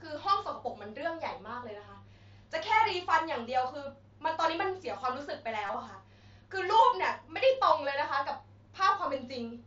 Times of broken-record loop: none

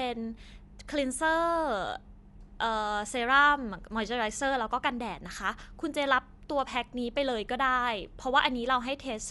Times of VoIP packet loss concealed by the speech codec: none

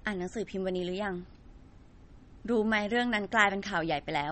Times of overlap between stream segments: none

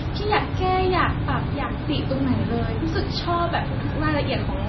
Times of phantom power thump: none

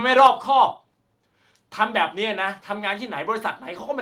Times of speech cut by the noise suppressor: none

